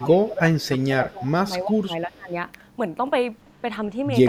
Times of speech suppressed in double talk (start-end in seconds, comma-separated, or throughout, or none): 0.00-2.35